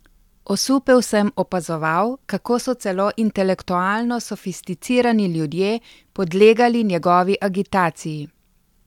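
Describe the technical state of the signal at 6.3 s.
At 6.3 s the speech signal is intact, with no audible fault at that moment.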